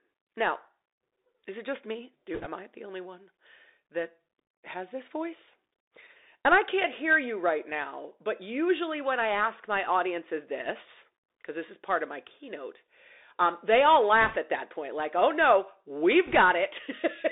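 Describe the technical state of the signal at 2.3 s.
The speech runs through a Bluetooth CVSD headset codec: one-bit up/down steps track the waveform, and the band is confined to roughly 300 Hz–3.7 kHz, leaving scratchy sibilants and granular hiss, a narrowband sound distinct from wideband codec smearing. From 2.34 to 2.46 s, bit errors on the Bluetooth voice link, at a rate of a few percent, add a brief rushing crackle without sharp clicks. Each flipped bit moves the signal by one step whose size grows with the speech level, and the damage fades quickly, which sets it apart from the loud pops of dropped packets.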